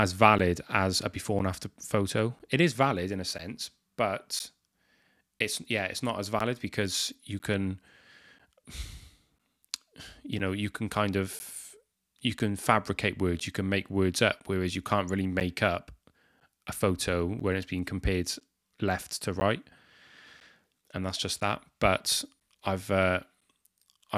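From 0.39 to 23.4 s, periodic USB or driver dropouts blank roughly 10 ms of speech every 1.0 s, ticking regularly; the waveform shows evenly spaced flat gaps, the spectrogram thin vertical clicks.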